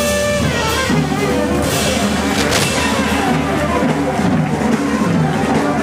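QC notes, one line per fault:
2.31–2.64 s, cable scratch noise: a dense, uneven burst of scratching and rustling rides over the sound for about a third of a second, only around 5 dB below it, likely a worn cable or connector shifting so its contact resistance jumps rapidly.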